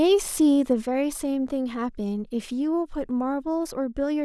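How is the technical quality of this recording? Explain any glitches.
The recording has one clear glitch, a sudden gain jump. At 0.85 s the level drops by about 6 dB in a single step and stays there to the end, with the speech and the background noise falling together. The likely cause is a gain setting applied instantly instead of ramped. On a waveform the envelope abruptly shrinks to roughly half its height; on a spectrogram every frequency band darkens at once along a vertical edge.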